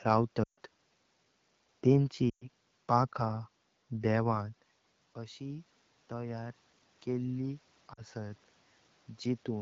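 Lost AMR speech frames break the speech from 0.44 to 0.58 s and from 2.29 to 2.49 s. Radio errors spoil frames, and the decoder repeats its last good settings at falling gain. Each gap drops to near silence within two frames. The voice returns weak or rough for a moment.

Automatic gain rising runs from 5.15 to 8.44 s. The talker moves back at about 4.5 s, dropping the input by about 13 dB. The gain control climbs slowly, by about 4 dB. Voice and room noise swell together.

Inside that rise, at 7.94 to 8.03 s, 40 ms of frames are lost. The voice drops to near silence within those two frames.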